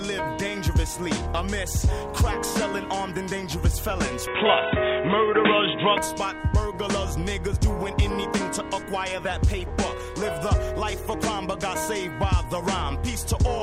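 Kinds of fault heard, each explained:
Input switched to a poorer device: the sound likely moved to a narrower device, losing everything above 3.8 kHz, about 5 dB level shift; spectrogram shows top band vanishing.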